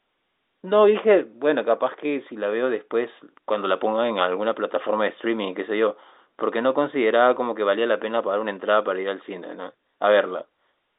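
No technical faults can be heard anywhere in this speech.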